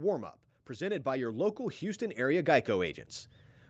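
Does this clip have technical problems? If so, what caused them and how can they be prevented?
Yes. Between 0.67 s and 3.05 s there is an automatic gain rise: the automatic gain control judged the incoming level too low and gradually raised its gain by about 10 dB over those 2.4 seconds. The speech and the background noise beneath it swell up together as the gain climbs. The top end stops near 8 kHz, which fits a call codec running in wideband mode. To prevent this, set a proper microphone input level so the gain control has no reason to ramp up, or turn the automatic gain control off.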